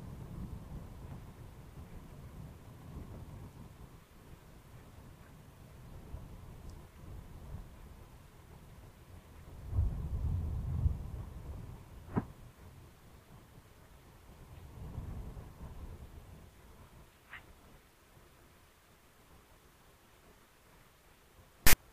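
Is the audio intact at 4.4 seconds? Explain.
Yes, at 4.4 seconds the audio is intact, with no dropout, click, distortion or other fault to be heard at that point.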